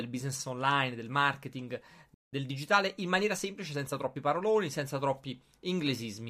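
At 2.14 s the speech cuts out and the output stays silent until 2.33 s, a gap of about 0.18 s. This is a playback stall. The speech breaks off in mid-flow and resumes after the silence. The likely cause is that the player ran short of buffered data, or its output thread was held up, so nothing reached the output until it recovered.

From 2.33 s to 4.17 s the speech runs at about 1.1 times normal speed while keeping its original pitch. This is time-compressed catch-up following the stall. To work off the backlog that built up during the gap, the player removes short slices of audio and cross-fades across the joins. The result sounds slightly rushed until normal pacing returns at 4.17 s.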